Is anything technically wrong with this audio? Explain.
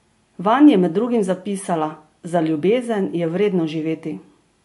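Yes. Throughout the speech, there is nothing above about 11.3 kHz, and a watery, swirling texture is plainly audible. This is likely MP3 compression, and the damage points to a low bitrate in the region of 48 kbps. Short of bits, the encoder cuts off the treble at a fixed frequency and drops weaker spectral lines, which then switch on and off from frame to frame. The result is dull, band-limited audio with a shifting, underwater quality and smeared attacks.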